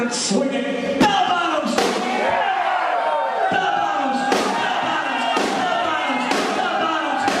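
Nothing stood out as a technical problem on listening.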